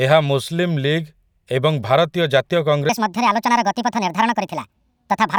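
From 2.89 s to the end, the speech jumps into a section at the wrong speed: it runs 1.55 times faster than it was recorded, and the pitch rises with it by about seven semitones, giving a hurried, chipmunk-like delivery. The likely cause is that this portion was played or resampled against the wrong clock. A pitch-shift fault would raise the voice while keeping its timing. Here the syllables also shorten and crowd together, so tempo and pitch change in lockstep.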